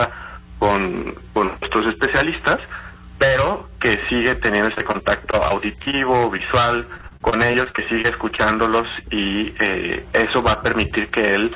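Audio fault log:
4.74–5.95 s, repeated packet loss (robotic sound): seven gaps, longest 48 ms, each patched by extending the previous sound, giving choppy stretches with pieces missing.
6.37–6.41 s, short concealed packet loss: about 20 ms never arrived in time; the receiver continued the last sound and blended back, leaving a brief smear.
6.97–8.40 s, repeated packet loss (robotic sound): eleven gaps up to 31 ms, together about 220 ms concealed, so the audio turns choppy and robotic with fragments dropped out.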